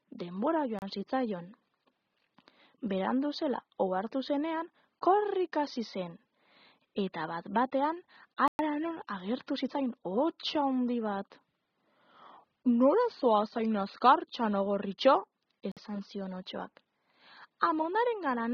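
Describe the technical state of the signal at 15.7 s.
At 15.72 s the sound drops out to a brief gap of silence, about 51 ms, returning at 15.77 s. This is a Bluetooth stall: interference most likely delayed wireless packets, so the headphones' buffer emptied and playback paused until retransmitted data arrived.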